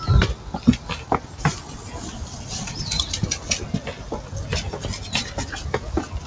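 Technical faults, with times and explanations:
1.23–1.39 s, sound cut by the noise suppressor: for roughly 150 ms the suppressor mistook the sound for background noise and turned it down, by about 5 dB at the deepest, so it briefly sags in level before recovering.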